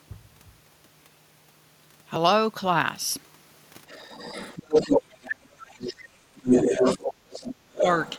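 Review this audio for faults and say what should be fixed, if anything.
Other side's voice leaking through at 3.88–5.01, 5.81–5.94, 6.36–7.14, 7.3–7.55 and 7.73 s to the end, often as loud as the talker. The likely cause is loudspeaker echo that the canceller left in the microphone signal. A spectrogram would show a second, unrelated harmonic pattern overlapping the talker's. Better canceller adaptation or a headset would prevent it.

Speech suppressed in double talk at 5.0–6.32 s, dropping by around 30 dB, and briefly at 6.7–6.84 s, only slightly. The likely cause is the canceller muting both voices while they overlap. The waveform would show sudden envelope collapses. A double-talk detector that preserves near-end speech would prevent it.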